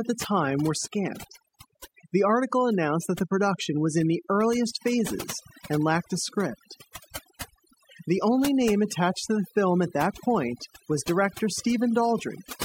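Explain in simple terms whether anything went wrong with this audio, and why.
The whole recording shows overdone noise removal. A cleanup tool set too strong keeps muting any slice of sound near its idea of background noise, dragging quiet bits of speech along. What's left of the background breaks into twinkling, warbling specks.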